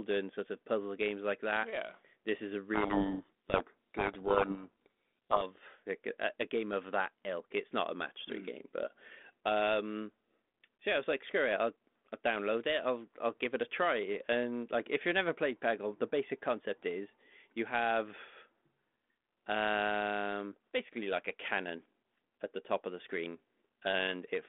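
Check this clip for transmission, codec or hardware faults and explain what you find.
One fault stands out, heard through a telephone-band G.726 link whose light coding hiss fits 32 kbit/s. From 2.74 to 5.44 s, between "yeah this is a" and "like a a game", harsh grinding distortion buries the speech: a codec payload misread, with the G.726 code words decoded in reversed bit order.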